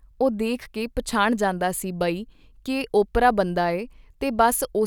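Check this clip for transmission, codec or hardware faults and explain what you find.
No faults found.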